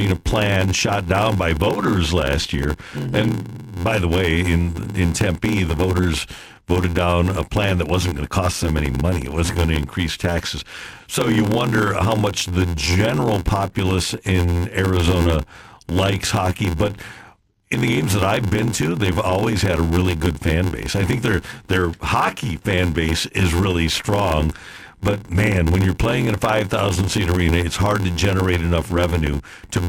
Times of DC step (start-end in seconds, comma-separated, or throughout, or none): none